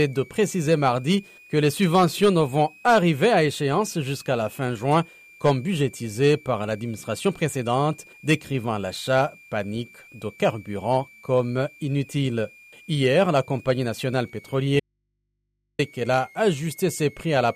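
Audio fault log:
throughout: switching supply whistle. A high, thin tone sits under the speech for the whole clip, roughly 30 dB below it, and its pitch wanders between about 2.11 and 2.63 kHz. A switch-mode power supply somewhere in the chain is cycling in an audible burst mode or beating against another converter. As the load on it shifts, the switching rate moves, so the whistle slides and steps in pitch.
14.80 to 15.79 s: audio dropout to a faint residue. The speech cuts out abruptly for just under 1 s and returns just as suddenly. There is no fade at either edge, which sets it apart from a natural pause. The gap is not silent. It holds a low mains hum, around 55 dB below the speech level. The likely cause is a lost signal feed while the stages after the break stayed powered and live, so they amplified the hum picked up at their open input until the feed came back.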